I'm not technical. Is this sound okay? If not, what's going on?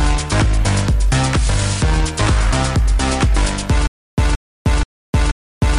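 No. From 3.87 s to the end, a stutter with silent gaps: a 0.17 s burst repeats four times, each followed by 0.31 s of silence, likely a stalled player replaying its last fragment.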